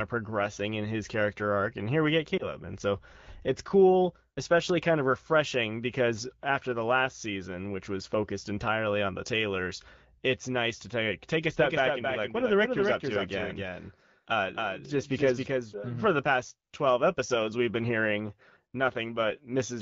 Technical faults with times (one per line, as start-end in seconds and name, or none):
2.38-2.48 lost AMR speech frames
11.59-15.73 doubled audio track